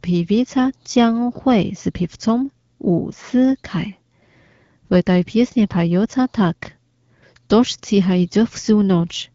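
Nothing stood out on listening to this speech, which is carried by an AMR wideband (HD Voice) codec at 12.65 kbit/s.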